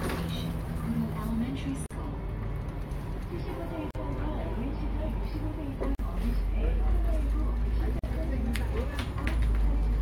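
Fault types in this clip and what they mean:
Gap at a join of encoded pieces: two-second pieces encoded separately were joined untrimmed, so encoder delay and padding leave 44 ms gaps breaking the sound every 2 s.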